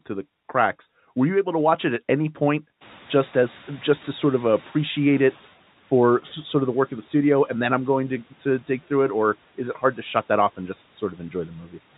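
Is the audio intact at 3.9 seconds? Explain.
No. At 3.9 s the noise suppressor is still catching up, from 2.8 to 5.5 s between "it at any point" and "for sort of the". The room noise jumps about 19 dB around 3 s, so it passes with less reduction at first, then sinks about 8 dB over 2.7 s. That steady fade sets it apart from gate pumping.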